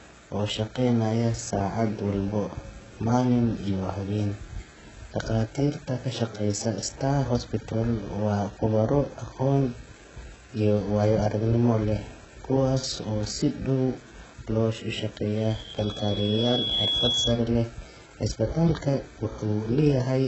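HE-AAC compression runs through the whole clip, likely the cause of its smeared, synthetic treble. The speech stops dead at 8 kHz. The upper band sounds rebuilt from copied lower bands rather than carried through, so sibilants come out gritty and lispy, with a metallic edge that never matches the harmonics below. The damage is heavy, which points to a very low bitrate of around 8 kbps.

A loudspeaker feedback squeal runs from 15.38 to 17.47 s. A microphone is picking up the loudspeaker it feeds, and at one frequency the loop gain tips above unity. A single 3.3 kHz tone swells out of the speech over roughly a second and a half until it sits a few dB above it. The squeal then stops.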